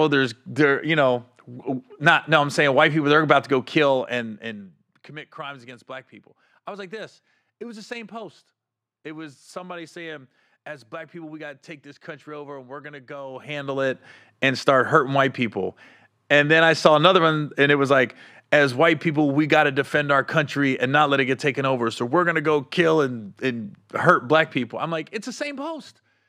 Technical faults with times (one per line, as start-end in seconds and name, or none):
3.71-5.16 zipper noise
13.23-14.04 zipper noise
24.36-25.81 zipper noise